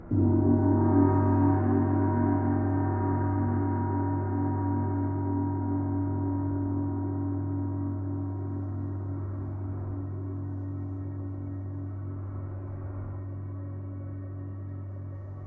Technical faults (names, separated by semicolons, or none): none